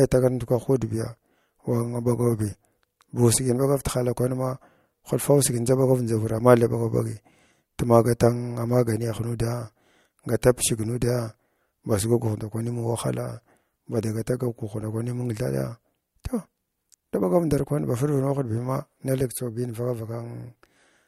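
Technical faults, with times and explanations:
No technical faults can be heard anywhere in the speech.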